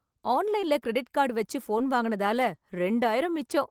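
Short concealed packet loss: about 20 ms of audio arrived too late twice, at 0.61–0.64 s just before "கிரெடிட் கார்டு வச்சி" and at 1.78–1.82 s right after it. Each gap was patched by extending the preceding sound, causing a brief smear.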